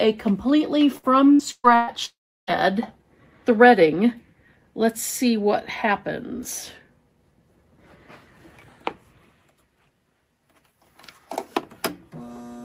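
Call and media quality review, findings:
Choppy, robotic stretch at 0.97–1.90 s: four gaps, longest 127 ms, about 360 ms lost. Receiver's concealment keeps replaying the last bit of sound to plug each hole, covering roughly 39% of that span. Repeated packet loss on the network path.

At 2.05–2.50 s, about 420 ms of audio never arrives. The last sound is stretched out and fades, leaving around 330 ms of silence before audio resumes with that piece missing. Likely a long network dropout.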